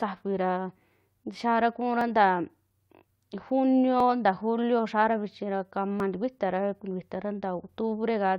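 Speech, with overlap between stream segments: tiny skips at 2.01 s after "xiara kuura", at 4.0 s before "nta julio xiara vichi", and at 6.0 s after "xiara vichi ra kama". Overlapping 2-second segments get trimmed, dropping 6 to 14 milliseconds each time.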